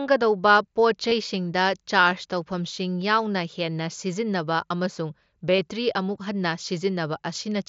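At 1.09 to 1.12 s and 5.56 to 5.59 s, the sound briefly takes on a held, buzzy tone and then warbles slightly as the real signal returns. The one at 2.10 s lasts about 7.5 ms and is nearly hidden. This is concealed Bluetooth headset packet loss. Packets from the headset went missing over the mSBC link, and the receiver filled each gap by repeating a closely matching stretch of the preceding waveform. The two 22.5 ms gaps fit runs of three lost frames.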